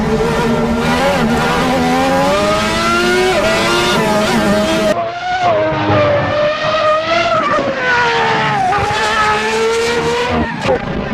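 Compressed frames are skipped at 3.67 s, 4.89 s and 10.79 to 10.82 s. The audio jumps ahead by roughly a tenth of a second at the first and last points and by about 0.15 s at the second, which fits several missing 20 ms frames.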